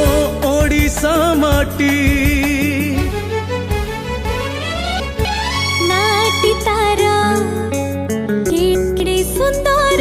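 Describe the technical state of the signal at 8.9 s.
At 8.9 s the signal sits inside a chunks-out-of-order fault spanning 8.50 to 9.00 s: a 250 ms chunk arrived one chunk late, so two neighbouring chunks play swapped. Unlike a dropout, nothing is missing; the audio jumbles briefly across three hard joins.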